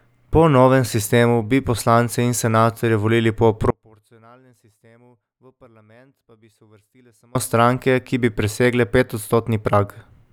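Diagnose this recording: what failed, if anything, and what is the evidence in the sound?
Just after "senatorje volili po" the speech drops abruptly at 3.70 s to a faint residue about 35 dB below normal, returning at 7.35 s after roughly 3.6 s. This audio dropout to a faint residue likely comes from an intermittent analogue connection while the downstream path stayed live.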